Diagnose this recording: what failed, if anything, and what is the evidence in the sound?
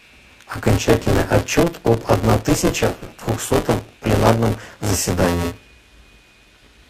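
The failure is in the driver or buffer stage: buffer tearing, running the whole way through. There's a robotic buzz at 172 Hz riding on the speech, which fits a 256-sample buffer, and it drops away whenever the signal does. The writer and the hardware read pointer have drifted into each other, so close to a third of every period is stale audio from around 20 ms earlier, with hard seams on each side producing that rattle.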